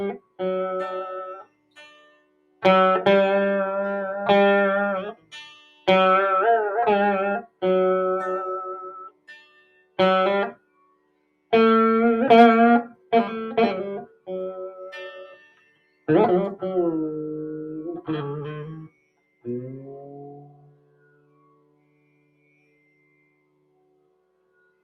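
A speech-tuned noise suppressor applied to music or sounds is left running throughout the audio. It treats steady, sustained material as noise, so its gain swings by roughly 20 dB, making the sound pump and thin out while transients pass through largely intact. Sound cut by the noise suppressor is heard at 0.18–0.4 s, 1.37–2.63 s, 5.13–5.88 s, 7.43–7.62 s, 8.86–11.52 s, 12.93–13.12 s, 14.06–16.08 s and from 18.87 s to the end. Held or decaying content sinks by up to about 19 dB (about 13 dB at 12.93 s, about 17–18 dB at 5.13 s and 14.06 s), and tails are truncated.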